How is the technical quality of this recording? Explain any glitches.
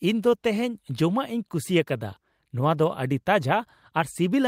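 No glitches turn up anywhere in this speech recording. There is nothing here that calls for an explanation.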